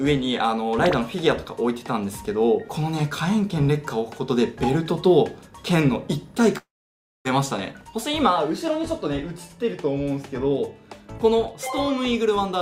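At 6.57 s a long network dropout is the likely cause of the break lasting to 7.27 s. The last sound smears into a fading buzz or hiss, then roughly 0.59 s of near silence; the waveform flattens and the spectrogram shows blurred, decaying bands before a blank gap, with about 0.6 s of audio lost.

From 7.39 to 9.13 s a jitter buffer speed-up trims short pitch-period pieces to remove roughly 70 ms of built-up delay. Playback runs at 104% speed with unchanged pitch; harmonic bands stay level while events sit marginally closer together.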